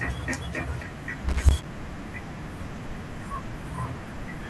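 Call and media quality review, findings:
Loose connector crackle, 1.29 to 1.73 s: irregular burst of scratchy crackle lasting about 0.45 s. Probable component is a worn or dirty jack or cable contact making and breaking as it moves, chopping the signal, with any DC on the line adding pops. Unlike codec loss, the bursts are uneven and rough, with no smooth fade.

Lost LE Audio frames, 2.38 s: very brief noisy smear, about 10 ms, which fits a single LC3 frame dropped on the Bluetooth LE Audio link. The decoder refilled the gap with the previous spectrum under randomised signs, so tonal detail blurs into noise for an instant. Unlike connector crackle, it is one short, even event rather than a scratchy cluster.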